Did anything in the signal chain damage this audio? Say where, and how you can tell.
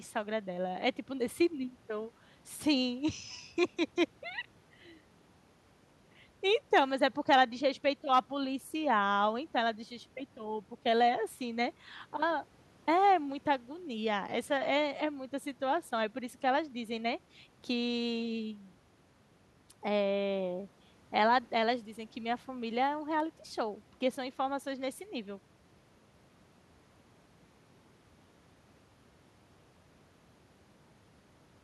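No, nothing damaged this audio.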